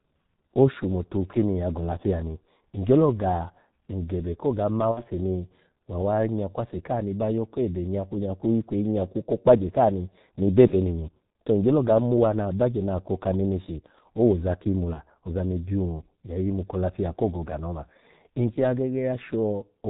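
The whole speech clip passes through the G.723.1 codec, and the damage is heavy. Nothing above 4 kHz survives, and the slow-updating voice model leaves the speech muffled and hoarse with smeared consonants, which fits the 6.3 kbit/s mode.

VoIP packet loss concealed by the speech codec occurs three times. From 4.91 to 5.03 s, between "ni ngyelo ga ngebekoga" and "ni wa awa nyakwase", the gap fits two lost 30 ms frames. From 10.67 to 10.76 s, just before "ni to ngyolo ga", and from 14.93 to 15.00 s, between "neneshi owoza ki imu" and "ozani byun ya yimu", each gap fits one lost frame. At each point the decoder repeats its last pitch and filter at falling gain, so the sound is stretched and fades, and the voice stays weak or distorted for tens of milliseconds or more after packets return.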